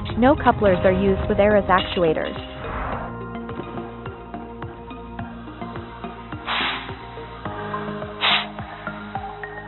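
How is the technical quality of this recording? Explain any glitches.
No glitches can be heard in this recording; the signal stays steady and continuous throughout, with nothing that points to a technical fault.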